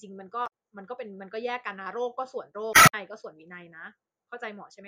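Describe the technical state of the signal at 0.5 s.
Right at 0.5 s the speech has just come through a burst of damaged data in a compressed stream, running from 0.43 to 0.48 s. For about 50 ms, some of the stored bytes were wrong. The decoder could not read those frames correctly, lost its place in the stream and had to hunt for the next valid frame header before decoding resumed. The result is a chirp, squawk, click or short hole that cuts across the speech just before the requested moment.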